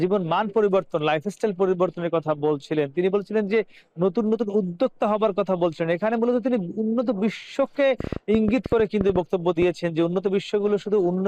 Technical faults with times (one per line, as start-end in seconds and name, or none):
8.00-9.63 train of clicks